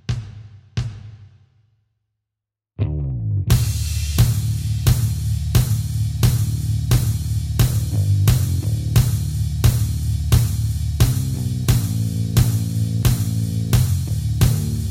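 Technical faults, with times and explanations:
Nothing technical stands out here; I didn't hear any problems anywhere in the recording.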